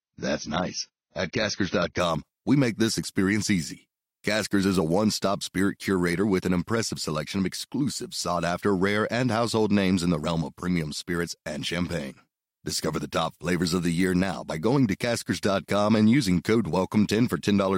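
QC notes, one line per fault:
0.0–2.0 s, adaptive stream starting at a low bitrate: nothing above 6.5 kHz and stronger codec artefacts, fitting a roughly 24 kbit/s start, then a clean jump up before "we make this experience".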